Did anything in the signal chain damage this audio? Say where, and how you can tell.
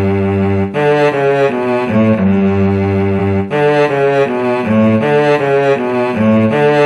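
Yes, compressed frames were skipped at the codec stage around 1.93 s and 3.18 s: the audio jumps ahead roughly 100 and 150 ms, fitting dropped 46.4 ms frames.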